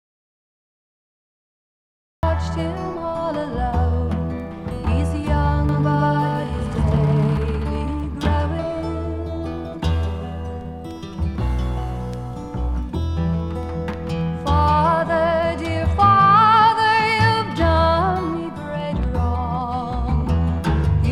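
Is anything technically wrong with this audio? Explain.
Yes, there are two faults. The clip opens in an audio dropout to silence lasting until 2.23 s. It is silent with no room tone, and sound arrives abruptly mid-flow. The likely cause is an input that was lost or muted while recording continued, writing silence.

From 5.69 to 7.37 s there is a doubled audio track. A second, full-band copy trails the original by around 150 ms at about the same level, with no decay or reverberant colour, and it switches in and out sharply. This points to the same signal being mixed in twice, via a slower path or misaligned edit.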